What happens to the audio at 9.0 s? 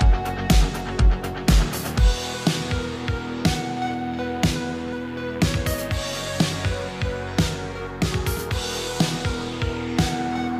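Nothing goes wrong at 9.0 s; the audio plays through that moment intact, with no dropout, click or other fault.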